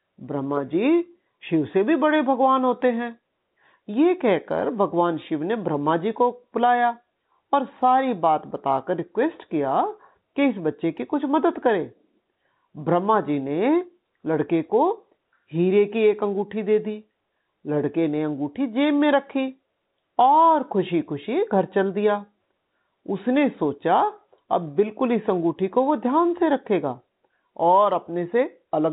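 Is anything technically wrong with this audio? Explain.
No, nothing is technically wrong with this speech; the narrow telephone band topping out near 4 kHz is simply G.711 A-law coding doing its normal job.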